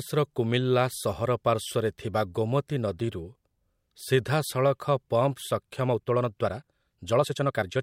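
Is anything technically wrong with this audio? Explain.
Yes. From 5.83 s to the end of the speech, the delivery suddenly rushes ahead at about 1.49 times its earlier pace while the pitch stays where it was. This is a time-stretched section: the likely cause is software squeezing that stretch to fit a shorter length, dropping short slices of the waveform so it plays faster without rising in pitch.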